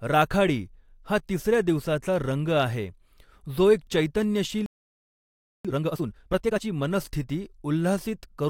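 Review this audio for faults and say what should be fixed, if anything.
A playback stall silences the speech from 4.66 to 5.65 s, nearly one second. The player likely ran out of data or had its thread blocked.

Time-compressed catch-up follows, from 5.65 to 6.63 s. Speech runs at twice normal speed with unchanged pitch, as small pieces are cut out and cross-faded.

A larger playback buffer and an unblocked audio thread would prevent the stall, and therefore the catch-up.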